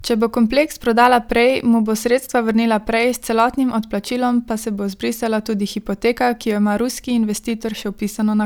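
From 0.51 s to 7.50 s, a tick sounds once every second, heard only against the speech. These are periodic USB or driver dropouts: the audio path stalls on a fixed schedule and skips a sliver well under a millisecond each time.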